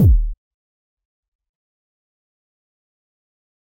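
At 0.32 to 0.34 s the audio jumps forward, the signature of compressed frames skipped. A run of roughly fifteen frames never reaches the output, either because they are missing from the stream or because the decoder discarded them as corrupt, so about 300 ms of material is lost. Playback resumes further along.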